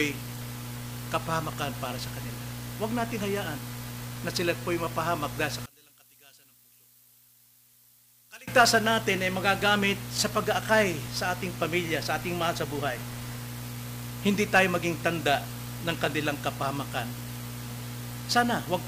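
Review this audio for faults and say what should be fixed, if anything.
From 5.66 to 8.48 s the level falls by about 25 dB to a faint residue. The likely cause is one channel inverted, so everything common to both sides cancels when they are summed to mono. Unlike a dropout, a faint copy of the differing content stays audible. A polarity check on each channel before any mono fold-down would prevent it.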